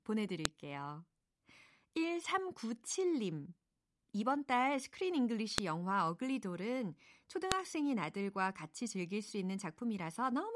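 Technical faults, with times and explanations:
0.45 s, 5.58 s, 7.52 s: file header played as audio. Each is a sharp, loud click at a join: one early on, one after "이번 달 스크린", and one after "영화 어글리돌은". Header bytes left in the stream are decoded as samples, producing an abrupt transient regardless of the speech level.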